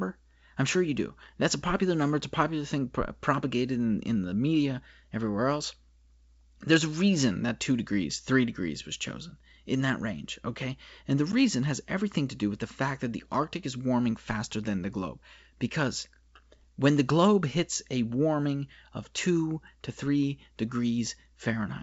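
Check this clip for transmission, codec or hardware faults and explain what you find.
No faults are audible in this speech recording.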